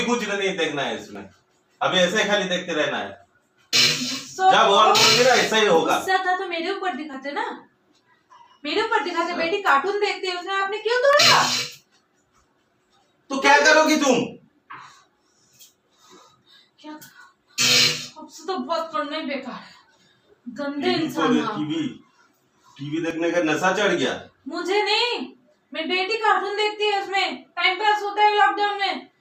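Overlapping time stamps between 2-second stream segments make the player cut real sound, leaving brief clicks or tiny skips at 1.15, 3.15, 7.14, 11.13, 17.11 and 23.11 s.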